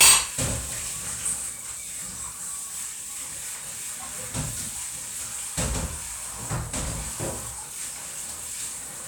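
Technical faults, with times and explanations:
0.01 to 0.18 s, hard clipping: The opening sound is driven about 10 dB past what the signal path can carry. Every peak above that ceiling is sliced off flat. Those squared-off tops create a spray of high harmonics that were never in the source. With this much overload, the whole loud onset turns into a harsh, buzzing fuzz rather than occasional crackle. The distortion stops once the level falls back below the limit.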